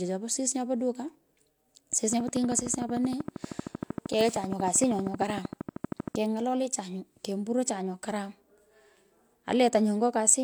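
From 2.13 to 6.16 s there's a train of clicks, a regular 12.9 per second, around fifty pops well above the speech, likely equipment interference.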